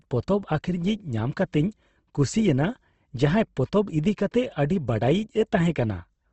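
Throughout the speech, the sound is grainy and rough, with nothing above 8.2 kHz. This is likely Opus compression in its music (CELT) mode, at a rate that fits around 16 kbps. Bands short of bits are refilled with folded or noise content.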